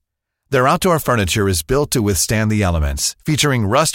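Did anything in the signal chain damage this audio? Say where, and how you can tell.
No, nothing in the signal chain damaged this audio.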